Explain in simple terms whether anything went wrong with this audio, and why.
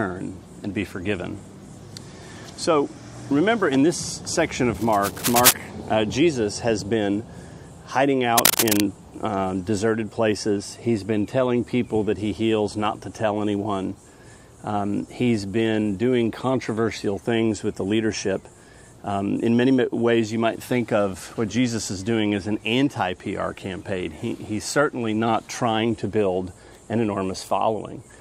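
A worn cable or connector was likely jiggled, causing cable scratch noise: rough scratching bursts, the first as loud as the sound itself and the second louder, from 4.75 to 5.53 s and 8.38 to 8.84 s.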